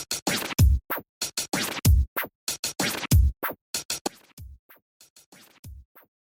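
From about 4.07 s to the end, the sound collapses by about 25 dB to a faint leftover, with the centre nearly gone. That's likely one channel inverted, so whatever both sides share cancels once they're summed to mono.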